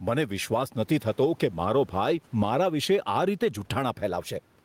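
Gain pumping runs through the whole speech clip. The swing is around 10 dB. The likely cause is input gain set far too high, with a fast limiter or compressor clamping down on every loud moment. Loud and quiet passages sit too close in level. The room noise is about 36 dB below the speech.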